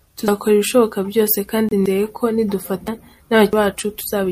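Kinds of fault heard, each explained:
Dropped buffer (overrun): the program likely failed to collect samples before the hardware overwrote them, so chunks vanished and their edges were joined. At 0.28, 1.86 and 3.53 s the speech skips ahead, by roughly a tenth, a fifth and three tenths of a second.
Damaged data in a compressed stream: corrupted bytes in the encoded stream made the decoder misread frames and lose sync while hunting for the next frame header. Just after "ibishoboka byose", from 1.69 to 1.73 s, this comes out as a brief glitch.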